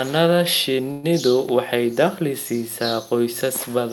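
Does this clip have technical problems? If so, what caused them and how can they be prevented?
Yes. A call audio freeze runs from 0.91 to 1.05 s, just before "waxay dakhli siisaa". The last sound stretches into a fading buzz. Delayed packets likely emptied the jitter buffer. The speech then resumes intact, about 120 ms late. A larger adaptive jitter buffer would prevent this.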